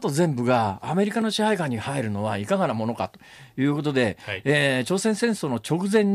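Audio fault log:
1.22 s, block of digital silence: the speech hard-cuts to silence for 0.73 ms and back, likely a short unfilled output buffer of roughly 32 samples, leaving a quick tick or dip.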